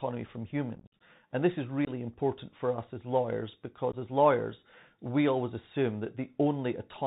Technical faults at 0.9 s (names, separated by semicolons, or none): Bluetooth CVSD headset codec; unconcealed Bluetooth headset packet loss